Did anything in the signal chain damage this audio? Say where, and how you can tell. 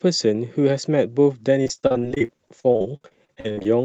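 Yes. At the network stage, the speech from 1.63 s to 3.67 s shows repeated packet loss, heard as a robotic sound. More than two dozen short holes, the longest about 47 ms, are each patched by stretching the preceding sound, so roughly a third of that span is concealment. The audio turns choppy, with pieces missing. A single dropout would leave one isolated gap, but here the gaps recur across two seconds, which points to sustained loss upstream of the Opus decoder.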